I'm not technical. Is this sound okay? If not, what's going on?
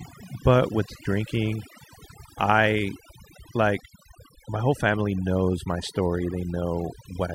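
No. This speech has overdone noise removal from start to finish. Someone ran a cleanup tool to take out background noise, but set it far too strong. The tool switches off slices of the sound whenever they seem close to the noise. It can't tell soft parts of the voice from the noise, so those vanish too. In the gaps you hear near silence with small sparkling flecks.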